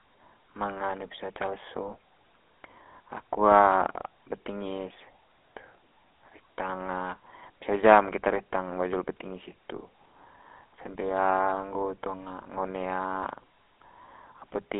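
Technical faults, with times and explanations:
Throughout, GSM full-rate codec: the speech is confined to roughly 250 Hz to 3.5 kHz and carries a plainly audible buzzy, gravelly roughness from sparse pulse excitation, which fits a 13 kbps GSM stream. Simple telephone band-limiting would sound narrow but smooth, without this grit.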